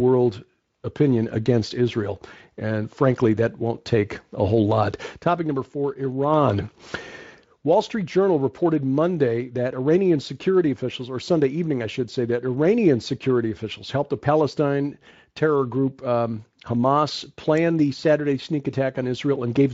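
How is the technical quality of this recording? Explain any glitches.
No glitches to report: the speech carries through its Speex-coded path with no dropouts, clicks or other discrete defects.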